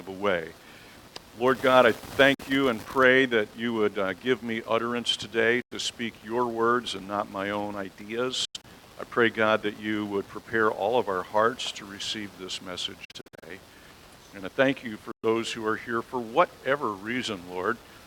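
The audio cuts to silence at 2.34–2.41 s, 5.62–5.73 s, 8.45–8.65 s, 13.05–13.44 s and 15.11–15.24 s, with the third and fourth gaps splintered into short holes, then resumes as if it had kept playing. These are Bluetooth dropouts, likely from late packets being discarded before reaching the headphones.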